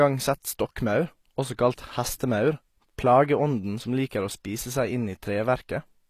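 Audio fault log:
Throughout, HE-AAC compression: the treble above the coded core is likely rebuilt by copying lower bands upward, so its harmonics misalign with the real spectrum; sibilants sound gritty and lispy, damage is plainly audible, the low bitrate fits about 24 kbps, and nothing sits above 15 kHz.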